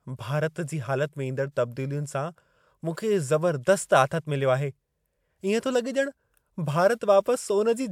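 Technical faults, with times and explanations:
No technical faults can be heard in this speech clip.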